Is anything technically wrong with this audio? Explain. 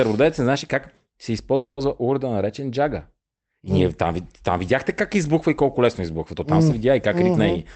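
Yes. From 1.55 to 1.79 s there is a call audio freeze, likely from late packets emptying the jitter buffer. The last sound is held as a fading buzz, then about 80 ms of silence. Speech resumes intact with "урда наречен джага", 220 ms late. A spectrogram shows smeared bands fading to a blank gap, and the waveform shows a decaying envelope that drops to a flat line.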